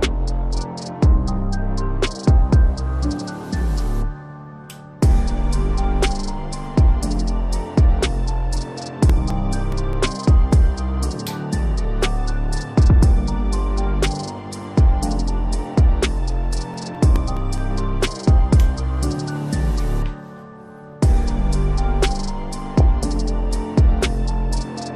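Throughout, the sound is dull and carries a gurgling, granular edge; likely MP2 compression at a low rate, around 80 kbps, which on a spectrogram shows upper bands flickering on and off. CD scratch ticks come as a regular train of brief clicks, about five a second, from 8.89 to 10.56 s and again from 16.32 to 18.41 s. Each is a thin vertical spike on the waveform, no more than a few milliseconds long. DAB burbling, short blips of noise in single sub-bands, appears at 14.14 to 14.59 s and 22.71 to 23.04 s. It points to weak reception, with a small fraction of a percent of bits corrupted.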